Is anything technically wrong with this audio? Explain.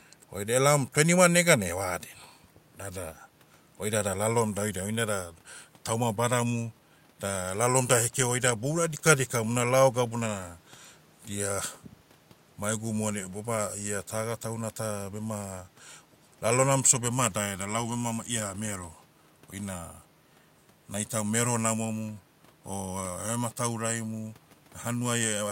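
No, nothing is technically wrong with this audio. The speech runs without any technical problem a listener would notice.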